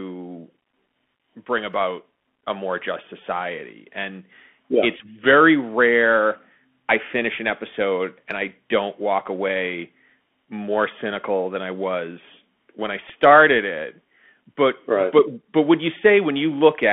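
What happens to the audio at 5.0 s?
Around 4.98 to 5.01 s there is a short Bluetooth headset packet repeated burst. Voice packets were lost over about 15 ms, which fits four 3.75 ms packets, and the headset decoded the previous packet's bits again, producing a brief buzz near 267 Hz. On a waveform the span shows identical short segments repeating every 3.75 ms. A spectrogram shows a brief stack of evenly spaced harmonics at multiples of 267 Hz, confined below the 3.4 kHz line band.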